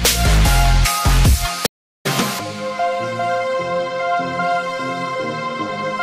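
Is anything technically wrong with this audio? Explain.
Yes. A stream reconnect occurs from 1.66 to 2.06 s. The connection drops, the audio goes silent for 385 ms, and playback resumes with a fresh decoder started mid-stream. The restart lands roughly 0.4 s further on, so a stretch of sound is skipped and the first moment after the gap comes in muted or fading up. This distinguishes it from a simple dropout or buffer underrun, where the sound would pick up exactly where it stopped.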